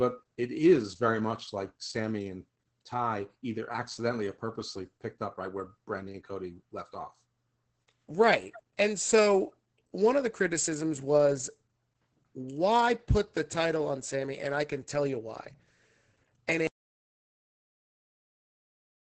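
From the start the speech carries heavy Opus voice compression: the SILK coder at 10 kbps, wideband, in 20 ms frames. Nothing survives above about 8.9 kHz, and the coarse excitation coding leaves the voice muffled, hoarse and slightly robotic throughout.

At 16.67 s the audio drops out to silence and stays silent to the end. This is complete silence with no room tone, which likely means the input was lost while the recorder kept writing silence. Whatever followed that point is gone.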